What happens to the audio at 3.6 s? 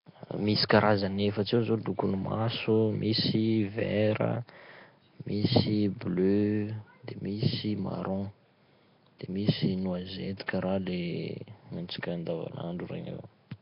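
At 3.6 s the speech carries the same damage heard through the whole clip: a rough, hissy halo and a smeared, underwater quality that points to likely Nellymoser compression. The codec spends its two bits a sample on the strongest bands in each 256-sample block and fills the starved bands with noise, consistent with a rate around 22 kbps. On a spectrogram, content stops dead at about 5.3 kHz, with speckled noise patches in place of fine harmonic detail.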